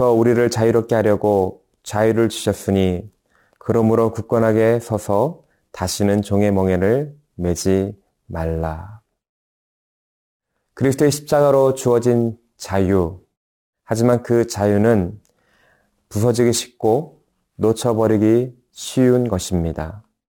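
Throughout the speech there is sample clock jitter: the converter's timing wanders by something like 7 microseconds, so each sample is captured slightly off its proper instant. Because the resulting error scales with how fast the waveform is changing, it sits roughly 30 dB below the signal and tracks it, adding a fine hiss and grain that thickens on loud passages and sibilant, high-frequency content, then disappears entirely in the pauses.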